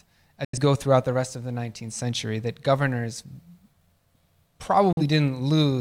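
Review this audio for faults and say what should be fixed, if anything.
Two short holes of silence cut into the speech, from 0.45 to 0.58 s just before "go throughout the rest", and from 4.93 to 5.02 s. Each fades out over about 3 ms. This is a digital broadcast dropout: the receiver muted while frames were missing or corrupted. About 85 ms and 43 ms of audio were lost, which fits two frames and then one frame of roughly 43 ms each. Better reception or stronger error protection on the transmission link would prevent these mutes.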